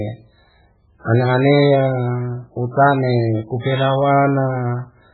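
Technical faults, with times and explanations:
Throughout, MP3 compression: the encoder was likely starved of bits, as a very low rate near 8 kbps would be, so it discarded everything above 4.3 kHz and dropped weak frequency lines frame to frame, leaving the speech dull, watery and swirling, with smeared onsets.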